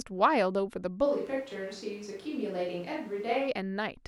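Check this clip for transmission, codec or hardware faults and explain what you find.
One fault here, a switch to a distant microphone from 1.07 to 3.47 s. The speech suddenly turns roomy and thin, with room noise only about 25 dB down, though the level barely changes. That's likely the close mic dropping out and a farther one taking over.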